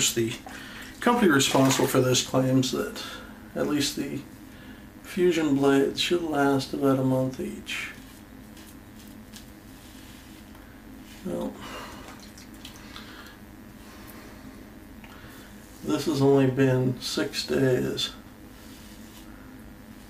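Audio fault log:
Throughout, mains buzz: sharp switching spikes twice per 50 Hz cycle give a raspy buzz rich in harmonics, unlike a smooth hum, sitting roughly 30 dB below the sound.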